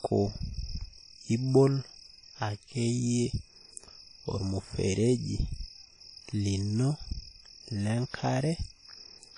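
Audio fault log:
throughout, WMA compression. The speech rings and washes, with hiss breathing along, and nothing above 10.1 kHz. Likely a WMA encode near 32 kbps.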